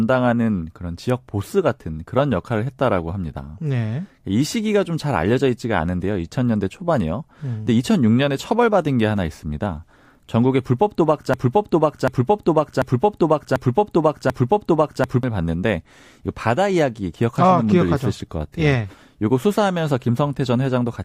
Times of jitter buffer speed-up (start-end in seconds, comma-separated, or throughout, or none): none